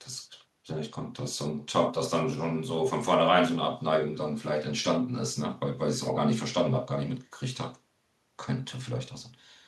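Listening to the speech, nothing stood out as a technical fault.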